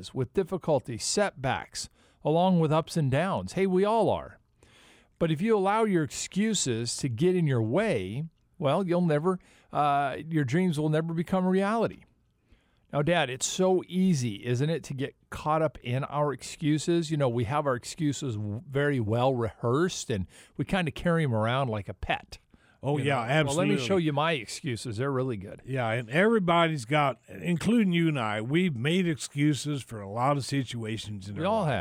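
No technical faults can be heard anywhere in the recording. There is no moment that calls for a timestamp or an explanation of something going wrong.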